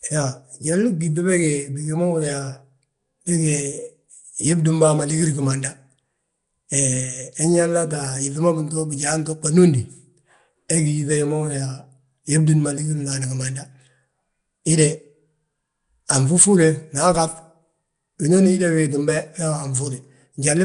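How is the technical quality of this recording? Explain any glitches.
Technical quality is compromised by codec damage running through the whole recording. The speech has a rough, hissy halo and a smeared, underwater character, and nothing is present above about 10.6 kHz. The likely cause is Nellymoser compression, Flash's microphone codec, at a rate that points to around 44 kbps. It codes short fixed blocks with very few bits per sample, leaving weaker bands empty and filling them with noise, which produces the hiss and smearing.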